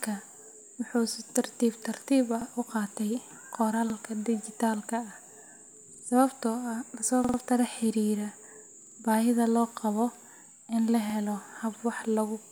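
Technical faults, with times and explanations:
2.42–2.46, 3.90–3.95, 5.94–6.04, 7.25–7.38, 8.82–8.96 and 11.10–11.15 s, repeated buffer: fresh audio missed its deadline, so the playback device replayed the 46 ms block it already held, which fits a 2048-sample buffer. The speech stutters with a hard seam at each repeat, once after "si tartiib tartiib ah", before "baahida loo qabo" and between "in la" and "helo hab wax". The block plays twice at 2.42, 3.90 and 11.10 s, three times at 5.94 s and four times at 7.25 and 8.82 s. Nothing is skipped, so the speech after each repeat is delayed rather than cut.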